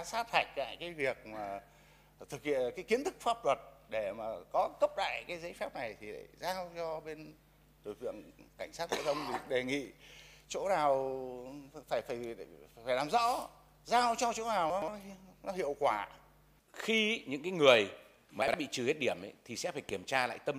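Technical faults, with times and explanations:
14.70–14.88 s and 18.42–18.54 s, chunks out of order: a 60 ms chunk of audio plays late each time. In the first it arrives two chunks behind its place, and in the second one chunk behind. Nothing is missing. The reordering leaves three hard joins in each span, so each moment sounds jumbled.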